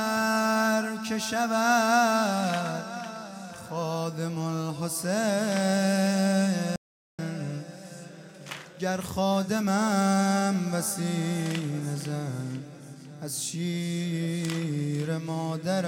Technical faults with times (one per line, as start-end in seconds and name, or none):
6.76-7.19 audio dropout to silence